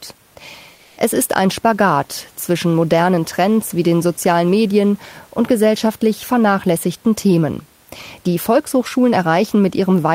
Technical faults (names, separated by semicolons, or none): comfort noise in place of the background